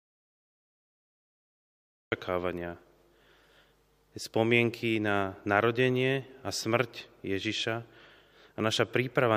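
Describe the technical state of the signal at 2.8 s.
At 2.8 s the speech signal is intact, with no audible fault at that moment.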